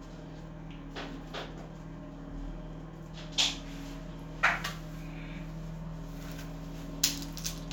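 No technical faults can be heard anywhere in this audio.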